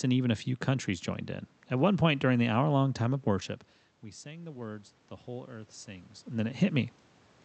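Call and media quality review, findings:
Automatic gain rising, 4.22–6.85 s, after "time of worship we". Input dropped about 18 dB. AGC ramped gain up about 5 dB. Voice and room noise swell together.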